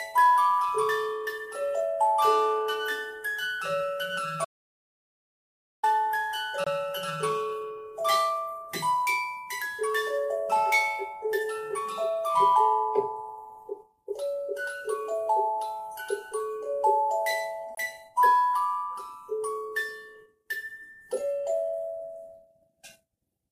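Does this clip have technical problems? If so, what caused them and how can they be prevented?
Yes. From 4.45 s to 5.83 s the sound cuts off into a stretch of silence lasting about 1.39 s, with no background or room tone underneath, and then resumes mid-flow. This is an audio dropout to silence, most likely caused by the input being lost, through a loose connection, a failed link or an accidental mute, while the recorder kept writing silence. Whatever occurred in that gap is unrecoverable. Securing cables and connections and monitoring input levels during capture prevents it.

Two much shorter holes follow, at 6.64 to 6.67 s and at 17.75 to 17.77 s, each about 23 ms long. After each one the audio continues as if it had kept playing underneath. These are Bluetooth dropouts, where a single audio packet, which fits the 23 ms gap, likely failed to arrive in time and was discarded, so playback went briefly silent until the next good packet. 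Keeping the headphones close to the source, clear of obstructions and 2.4 GHz interference prevents it.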